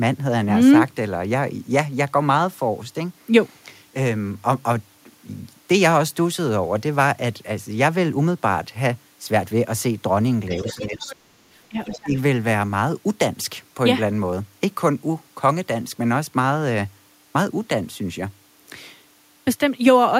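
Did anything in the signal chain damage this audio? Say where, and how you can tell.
Yes, in the call processing stage. Between 10.48 and 11.37 s the talker's speech sinks sharply, at its deepest by something like 35 dB, with roughly 700 ms of that span affected. A second, shallower dip follows from 11.69 to 12.15 s, around 15 dB. This is speech suppressed in double talk, likely from an echo canceller that couldn't separate the near talker from loudspeaker echo while both sides spoke, so it attenuated everything it heard.

The same stretch shows the other side's voice leaking through: from 10.56 to 11.15 s a second voice sits under the talker, roughly 15 dB below the speech, and a brief scrap returns between 11.88 and 11.99 s at about 20 dB down. The far end was being played on the talker's loudspeaker, and the echo canceller likely left part of it in the microphone signal, so it survives as a faint competing voice inside the suppressed stretches.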